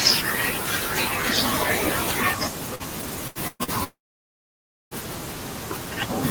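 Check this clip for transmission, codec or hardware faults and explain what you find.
The clip has packet-loss faults of three kinds, clustered between about 2.75 s and 4.94 s of this speech.

Short concealed packet loss occurs at 2.75 to 2.83 s and 3.64 to 3.71 s. Each sounds like a brief smear or wobble. About 40 ms of audio failed to reach the decoder in time, and the receiver covered the gap by extending the preceding sound before blending back into the real signal.

A burst of packet loss occurs at 3.28 to 3.38 s and again at 3.47 to 3.63 s. The speech turns into a held, fading continuation and then resumes further on. Consecutive packets went missing, about 80 ms and 120 ms, and the receiver stretched the last sound while lowering it. The second burst ends in roughly 20 ms of silence.

From 3.84 to 4.94 s a long stretch is gone. The last sound drags on briefly, and then nearly a second of silence follows before speech returns with about 1.08 s skipped. 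This is likely a long network dropout, with no audio arriving for that span.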